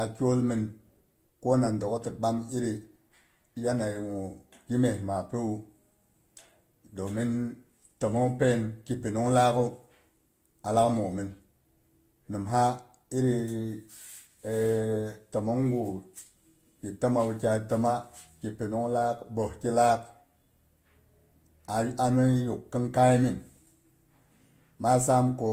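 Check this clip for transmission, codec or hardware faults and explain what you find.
One codec fault runs through the whole recording.

Transcoding between lossy codecs, present throughout: the sound was likely encoded with Vorbis and then re-encoded with Opus, which fits rates of about 48 kbit/s and then 32 kbit/s. The second encoder spends its limited bits reproducing the first one's artefacts, then adds its own coarse quantisation. Both layers of artefact sit together in the speech, and nothing remains above 19.6 kHz, the lowest cut-off in the chain.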